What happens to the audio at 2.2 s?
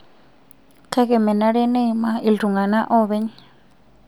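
Nothing goes wrong at 2.2 s; the speech carries on intact through that moment with no audible fault.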